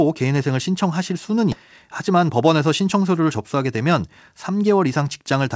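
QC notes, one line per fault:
1.52–1.54 s, skip ahead: the speech lurches forward with no pause or fill, so roughly 0.7 s of talk is missing and the two sides butt together. The audio was dropped in transit or by an overflowing jitter buffer while later audio was already queued.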